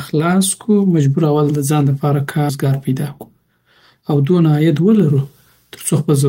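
At 2.49 to 2.51 s a skip ahead occurs: roughly 0.4 s of speech was dropped and playback jumps forward with no gap, the two sides joined abruptly. From 2.64 to 4.03 s, just before "او دونه", a jitter buffer speed-up trims short pitch-period pieces, about a tenth of a second in total, so speech runs at 107% speed, hurried but at unchanged pitch.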